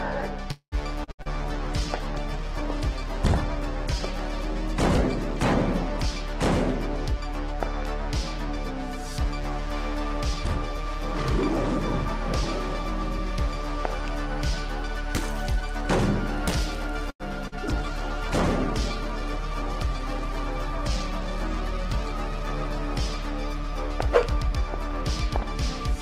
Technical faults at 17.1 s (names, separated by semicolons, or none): short stall from a late packet